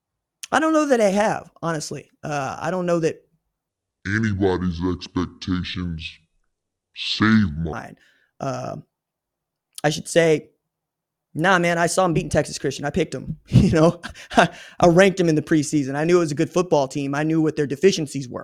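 Speech, with a section at the wrong speed from 3.69 to 7.73 s, playing at about 0.6 times normal speed, roughly ten semitones lower, deep and dragging, likely from resampling to a mismatched clock. On a spectrogram, harmonics drop and spread out in time.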